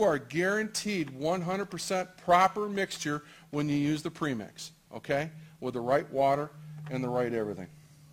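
A gritty, inharmonic fizz clings to louder and brighter sound throughout, roughly 30 dB down: crude rate conversion from 48 kHz to 44.1 kHz, dropping samples without filtering.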